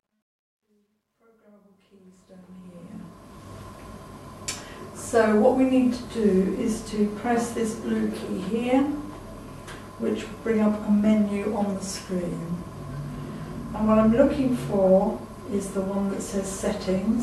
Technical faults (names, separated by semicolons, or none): truncation distortion on a fade